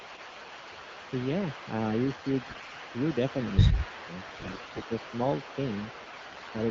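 From 0.0 to 1.3 s, 1.51 to 1.71 s and 1.98 to 6.7 s there is an echo leak, likely from a far-end speakerphone whose echo canceller let its microphone pickup through. A faint copy of the speech trails 168 ms behind, roughly 25 dB down.

From 2.43 to 2.81 s there are AMR bit errors: flipped bits in weakly protected parts of the AMR-WB frames misplace excitation pulses and skew the finer parameters. Pitch and level hold, but the speech turns hoarse and gargly.

From 3.74 to 4.08 s the speech is suppressed in double talk, likely because the echo canceller mistook overlapping talk for echo and attenuated it. The speech dips by around 10 dB in brief pieces.

From 4.27 to 4.85 s and 6.11 to 6.5 s the same AMR bit errors return with a high error rate. The speech grows scratchy and gargly again against the clean 12.65 kbit/s HD Voice coding.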